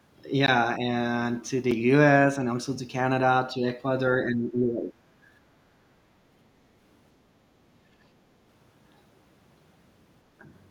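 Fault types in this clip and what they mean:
Block of digital silence: Samples drop abruptly to zero and return with no fade, giving a 16 ms gap at 0.46 s and a shorter tick at 1.71 s, which fits a 256-sample buffer.
Speech suppressed in double talk: The voice dips by about 10 dB from 4.25 to 4.92 s, then by around 20 dB at 7.96 to 8.13 s, likely from an echo canceller ducking during overlapping talk.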